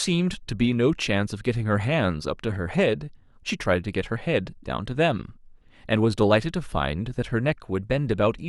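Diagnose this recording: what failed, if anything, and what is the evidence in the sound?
Nothing in this speech recording stood out as a fault on listening.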